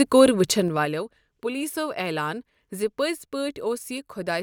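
A speech clip with zipper noise between 0.51 and 0.94 s. The level drops by about 15 dB, but it comes down in 3 dB steps, roughly ten a second, with no smoothing between them. Each jump puts a tiny click into the waveform, so you hear a quick ticking ride along on the speech while the gain falls, the classic sign of a level control updated in coarse increments rather than ramped.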